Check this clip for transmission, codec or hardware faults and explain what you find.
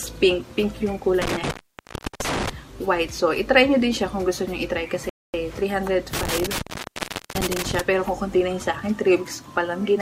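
Three faults turn up: two bouts of intermittent contact and one rebuffering stall.

Intermittent contact occurs from 1.22 to 2.50 s and again from 6.13 to 7.80 s. A loose plug or cable briefly loses its connection, and the signal drops out for about 0.69 s and 0.77 s respectively, with crackle where the contact breaks and remakes and faint hiss in between. On a waveform the envelope collapses to a thin noise floor bracketed by spiky bursts. A spectrogram shows broadband vertical streaks at each edge.

The rebuffering stall runs from 5.09 to 5.34 s. Playback ran out of downloaded data and waited for more, so the audio goes to clean silence for 245 ms and then picks up exactly where it left off. Nothing is lost, but the clip is stretched by that quarter-second. The waveform shows a flat, silent gap with no crackle at either edge, and the spectrogram a fully blank vertical band.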